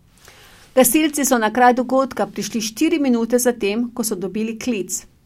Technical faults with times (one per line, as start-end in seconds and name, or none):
none